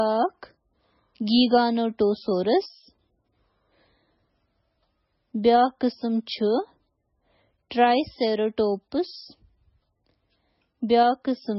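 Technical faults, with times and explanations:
Throughout, MP3 compression: the speech has a hard ceiling with nothing above 5.6 kHz and a heavily watery, swirling texture on s sounds, likely from a very low bitrate near 16 kbps. Unlike a plain low-pass filter, weak frequency lines flicker on and off between frames.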